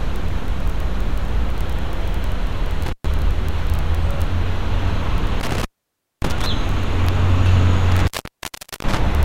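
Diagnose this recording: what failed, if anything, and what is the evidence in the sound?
Intermittent contact in the analogue wiring: the sound drops out at 2.86–3.11 s (open about 120 ms), 5.40–6.46 s (about 570 ms) and 7.92–9.00 s (about 760 ms). A loose plug or cable breaks the circuit briefly. The waveform collapses to a near-flat hiss floor with spiky crackle at each edge, and the spectrogram shows vertical broadband clicks bracketing dark gaps.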